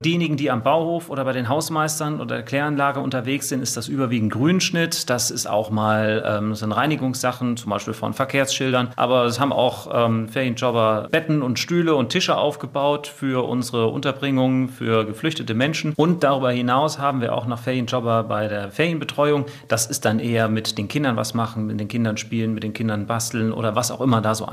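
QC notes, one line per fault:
No faults found; nothing to log.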